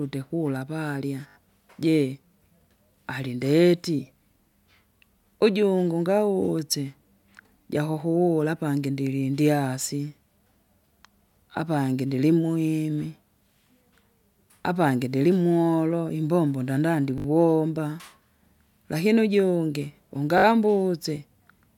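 At 1.28–1.36 s, 17.18–17.26 s and 20.38–20.44 s, a repeated buffer makes the same 20 ms slice of speech play three or four extra times, giving a brief buzzy stutter. Unlike a dropout, nothing goes silent and nothing is skipped.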